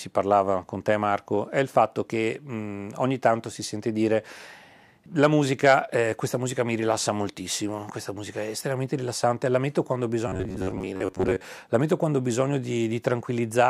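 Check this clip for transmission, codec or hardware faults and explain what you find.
One fault: robotic sound from repeated short buffers, 10.28–11.45 s, after "la metto quando ho". Audio likely arrived too seldom, so about half this stretch loops a roughly 10.7 ms chunk, forcing a metallic 93.8 Hz buzz. A spectrogram shows rigid, evenly spaced harmonics, and the waveform shows identical repeating cycles.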